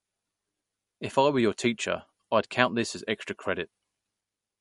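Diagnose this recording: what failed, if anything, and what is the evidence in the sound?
The codec stage is the likely culprit: lossy MP3 compression starved of bits, consistent with a low bitrate around 48 kbps. Throughout the speech, nothing sounds above about 11.1 kHz, the hard treble ceiling an encoder imposes when it runs short. Below that, weak frequency lines that the hearing model judged expendable drop in and out between frames, giving a plainly audible watery, swirling texture, with metallic chirps on sibilants and smeared consonant attacks.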